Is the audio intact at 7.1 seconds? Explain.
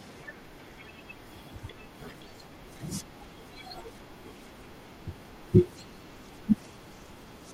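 No. Around 7.06 to 7.1 s the speech briefly jumbles, a tiny scrambled moment where the flow stutters out of sequence. This is chunks out of order: one 20 ms block of audio arrived late and was played one chunk after the block that should have followed it. Nothing is missing, but the swapped order creates three abrupt joins, and those hard edges produce the garbled instant at 7.1 s.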